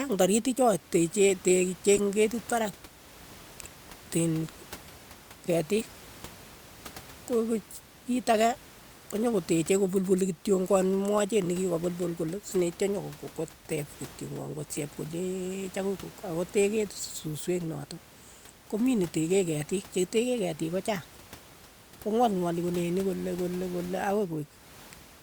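Speech with room noise about 22 dB down, marred by corrupt frames decoded. A glitch peaking near -20 dBFS spans a few frames at 1.97–2.00 s. A quieter single-frame glitch comes at 12.11 s.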